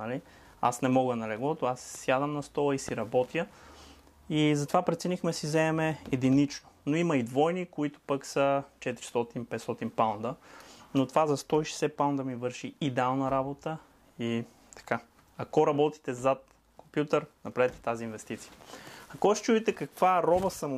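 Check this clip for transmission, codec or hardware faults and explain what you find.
There's one fault, a loud pop from 2.89 to 2.91 s. It's a single sharp click, peaking about 10 dB above the surrounding sound, which carries on underneath. The likely cause is a brief voltage spike, such as static, a switch or a driver glitch, getting into the signal chain.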